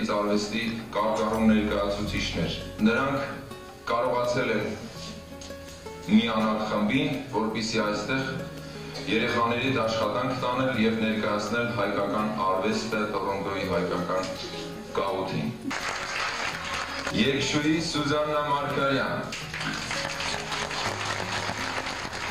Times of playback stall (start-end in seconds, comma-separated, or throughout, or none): none